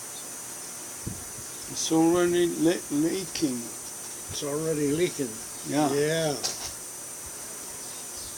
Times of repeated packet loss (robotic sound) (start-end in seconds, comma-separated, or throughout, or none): none